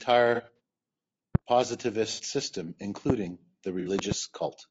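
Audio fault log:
Throughout: low-delay AAC compression. The speech is plainly rough and grainy, with a hiss sitting between the harmonics and a top band that sounds thin and somewhat synthetic. The likely cause is AAC-ELD, the low-delay codec used for calls, running at a low rate, consistent with about 32 kbps. Its very short frames separate the pitch harmonics poorly, and at this rate there aren't enough bits to keep the gaps between them clean or to code the highs faithfully.
0.35–0.60 s, 2.12–2.21 s, 3.80–3.89 s: AAC frame loss with concealment. Each spot sounds like a smeared, noisy patch where the speech briefly loses its clarity and then recovers. The first patch is made of three short dropouts of roughly 30 ms each, spread over about a quarter of a second and totalling 90 ms. The later two each cover about 60 ms. The decoder fills the missing frames from the last good spectrum, which produces noisy smearing instead of silence.
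1.35–1.38 s, 3.10–3.12 s, 3.99–4.14 s: loud pop. Single sharp pops land at the first two times, about 20 dB above the speech, which keeps running underneath. At the third, two pops follow in quick succession, about 15 dB above the speech. The likely cause is a sudden electrical step or spike, from a connector, a switch, static or a driver glitch, added on top of the audio and shaped into a brief thump by the circuitry that follows.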